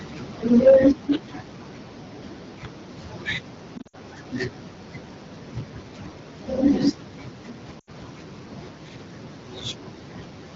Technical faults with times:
3.78-3.96 lost AMR speech frames
7.79-7.90 lost AMR speech frames

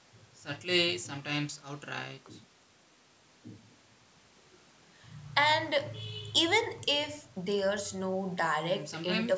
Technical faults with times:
none

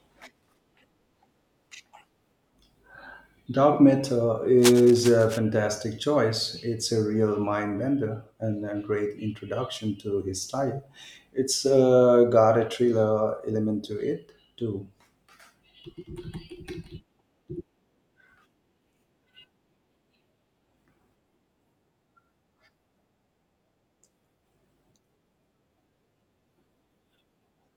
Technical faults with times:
4.58-5.39 cable scratch noise

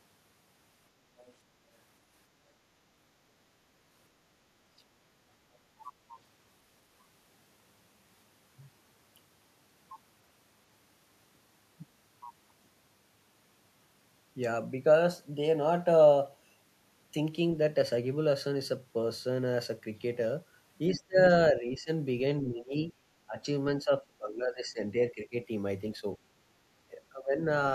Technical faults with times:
1.19-1.33 other side's voice leaking through
20.91-21.17 speech suppressed in double talk
21.53-21.89 speech suppressed in double talk
22.42-22.92 speech suppressed in double talk
23.27-23.44 speech suppressed in double talk
23.82-25.35 speech suppressed in double talk
25.96-26.05 speech suppressed in double talk
26.88-27.41 speech suppressed in double talk

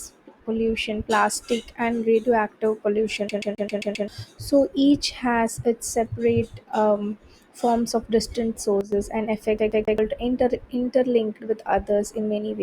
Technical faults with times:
3.28-4.08 CD stuck on one turn
8.81-8.92 sudden gain jump
9.59-9.98 CD stuck on one turn

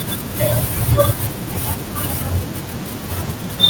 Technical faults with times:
none

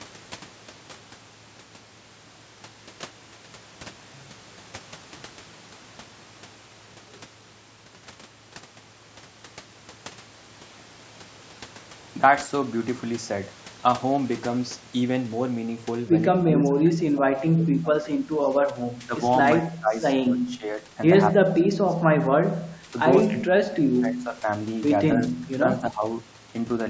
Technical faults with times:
16.51-19.19 speech suppressed in double talk
19.64-19.95 speech suppressed in double talk
20.27-20.85 speech suppressed in double talk
21.44-22.93 speech suppressed in double talk
23.31-24.47 speech suppressed in double talk
25.32-25.47 speech suppressed in double talk
25.81-26.03 speech suppressed in double talk

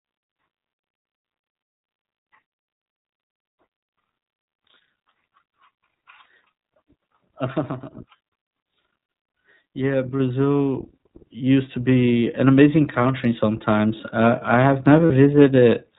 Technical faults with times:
0.00-15.98 iLBC codec
6.24 lost iLBC frames
10.20 microphone volume stepped up
11.22 microphone volume stepped up
15.06-15.12 lost iLBC frames

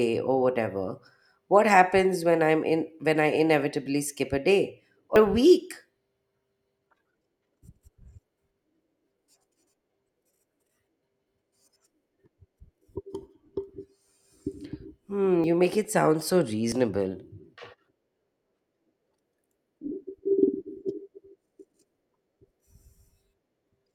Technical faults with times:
5.16 dropped buffer (overrun)
15.44 dropped buffer (overrun)
16.72 dropped buffer (overrun)
18.36 dropped buffer (overrun)

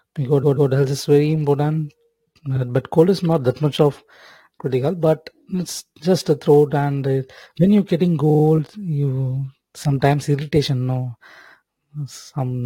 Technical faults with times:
0.00-12.66 sample clock jitter
0.42-0.70 repeated frames
8.29-8.43 repeated frames

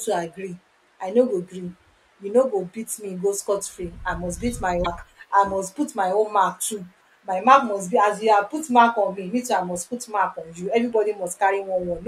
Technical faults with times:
4.81-4.87 damaged data in a compressed stream

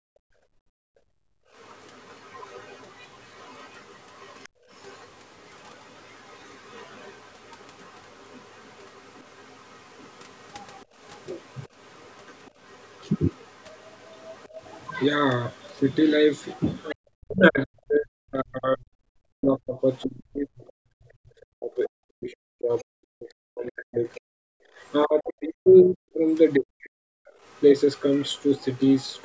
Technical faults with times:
0.00-1.52 background gated by the echo canceller
1.58-16.91 other side's voice leaking through
4.49-4.69 background gated by the echo canceller
16.92-27.29 speech suppressed in double talk
19.99-24.92 other side's voice leaking through
24.61-24.77 background gated by the echo canceller
26.52-29.22 other side's voice leaking through

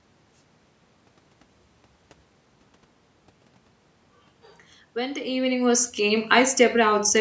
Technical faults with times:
none

